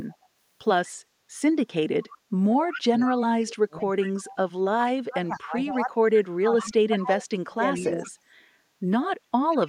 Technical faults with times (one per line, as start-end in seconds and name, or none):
0.09-0.27 echo leak
2.11-4.35 echo leak
2.87-3.88 speech suppressed in double talk
5.05-8.09 speech suppressed in double talk
5.34-5.77 echo leak
6.57-7.02 echo leak
7.75-8.11 echo leak
9.52-9.69 echo leak